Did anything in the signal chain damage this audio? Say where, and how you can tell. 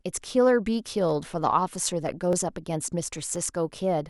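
Yes, at the driver or buffer stage. About four clicks in the speech between 0.27 and 3.36 s, spaced a steady 1.02 s apart, are likely clock drift buffer slips: two clocks roughly 700 ppm apart force a few dozen samples to drop or repeat. Random dropouts would not keep such regular spacing.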